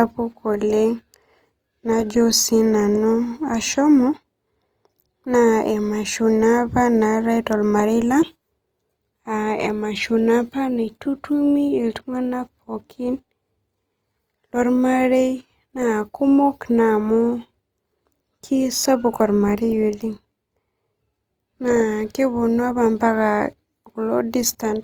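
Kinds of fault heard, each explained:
Opus compression: the speech sounds rough and grainy throughout, with plainly audible noise-like fill instead of the swirling, hollow holes of MP3. Content reaches about 20.2 kHz, so the band isn't narrowed. This is likely Opus music-mode coding at a low rate, around 24 kbps.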